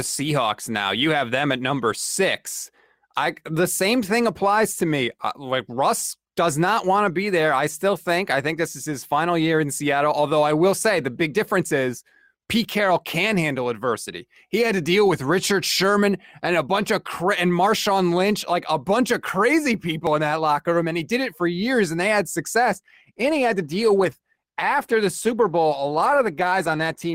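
Speech, with an adaptive stream dropping to a lower bitrate from 22.70 s to the end at 27.14 s. Quality falls abruptly with no gap: codec artefacts rise, which fits a switch from roughly 64 kbit/s Opus to 16 kbit/s after the connection slowed.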